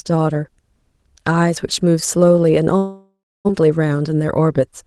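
At 2.77 s the speech breaks off. The last sound is stretched into a fading buzz, and then about 270 ms of near silence follows. The gap lasts until 3.51 s. When the speech returns, roughly 600 ms of it is gone. This is most likely a long network dropout. Packets stopped arriving, and the receiver covered the hole with a concealment tail that decayed to silence. The stream also came back around 70 ms later than before.

From 3.61 s to 4.83 s the jitter buffer speed-up follows. The buffer had grown by about that same 70 ms after the late audio arrived. To shrink it, the receiver cut many short pitch-period slices, removing around 70 ms in total. The speech runs at about 105 percent speed while the pitch stays the same, so the closing stretch sounds slightly rushed. The Opus call path keeps its 12 kHz top end throughout.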